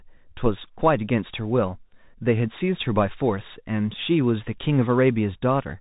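From start to finish the speech carries the sound of a Bluetooth CVSD headset codec, consistent with a 64 kbps one-bit delta stream whose step size keeps chasing the waveform. Nothing passes above 4 kHz, s sounds turn scratchy, and granular hiss sits underneath. Unlike a clean narrowband filter, loud high sounds outrun the step and distort.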